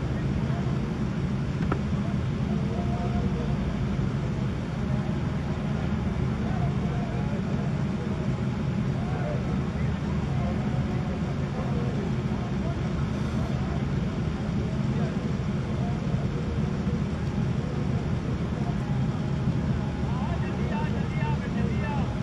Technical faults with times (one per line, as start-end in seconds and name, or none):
none